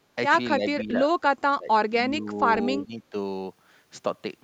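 An echo canceller likely turned the local talker down along with the loudspeaker echo during double talk. The result is speech suppressed in double talk: the speech dips briefly at 0.57 s, then more deeply from 0.8 to 1.0 s, sinks hardest from 1.22 to 1.71 s (around 20 dB down), eases to a slight dip from 2.07 to 2.43 s, and drops again from 2.74 to 3.14 s.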